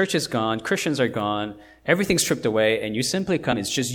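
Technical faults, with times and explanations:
3.52 to 3.54 s, damaged data in a compressed stream: just after "everything's stripped away and", a quick blip as the decoder hits bad bytes, loses sync and hunts for the next frame.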